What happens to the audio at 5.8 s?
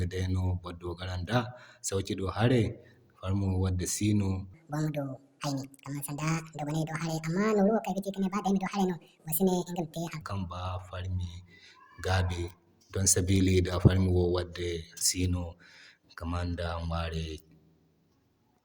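A section at the wrong speed runs from 4.54 to 10.22 s, covering 5.7 s. The speech plays 1.71 times too fast, likely from being played against the wrong clock, so it sounds hurried and is pushed up by nearly ten semitones.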